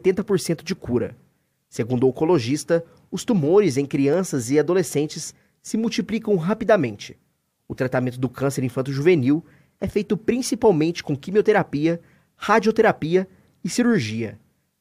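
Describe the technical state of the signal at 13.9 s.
At 13.9 s the signal is intact, with no dropout, distortion, glitch or other fault audible.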